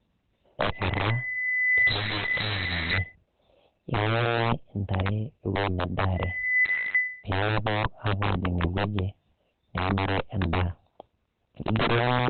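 From the start of the speech and throughout, loud peaks break into violent cracks rather than flattening. This is integer overflow. The signal runs about 11 dB too hot, so on a small share of samples (roughly 7 percent) the value passes the largest integer and wraps to the opposite sign instead of being held at the limit. Each wrapped peak jumps across the full range, which is why it sounds like a sharp snap instead of the fuzzy, compressed buzz of ordinary clipping.

Also running through the whole clip, the audio is muffled and hoarse, with nothing above about 4.3 kHz, so it has a narrow, telephone-like band. The likely cause is heavy Opus compression in its speech (SILK) mode, at a low rate that fits around 12 kbps. The loss shows up as dullness and a husky, hoarse quality.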